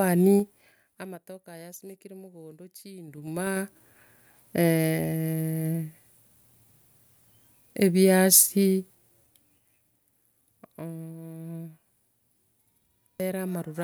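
Zipper noise runs from 0.34 to 1.20 s and again from 3.03 to 3.80 s in this speech clip. The level first falls by roughly 25 dB, then climbs back by about the same amount. Each move is made in 3 dB jumps at about ten a second, with no smoothing between them. Every jump leaves a small click, so a ticking zip rides on the speech while the level moves.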